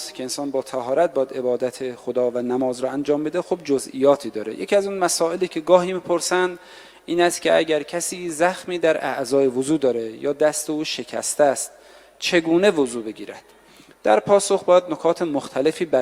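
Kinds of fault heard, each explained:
No technical faults are audible.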